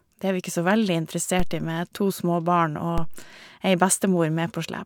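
DC steps at 1.40 s and 2.98 s: the waveform's zero line jumps by about -14 dBFS, then decays through a 2 Hz high-pass, each heard as a low thump under the speech.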